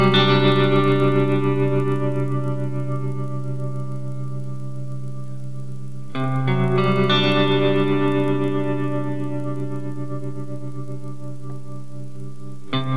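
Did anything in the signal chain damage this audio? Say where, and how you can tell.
Yes: the resampler restarted on every block during the 48 kHz to 24 kHz conversion. Ticks repeat throughout at 25 Hz, one per 40 ms block edge, and only while sound is present.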